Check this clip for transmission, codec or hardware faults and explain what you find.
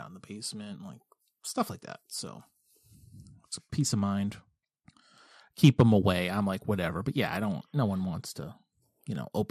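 One codec fault runs through the whole speech clip. It sounds dull, with a gurgling, granular grain, which is likely MP2 compression starving upper sub-bands of bits, fitting roughly 80 kbps.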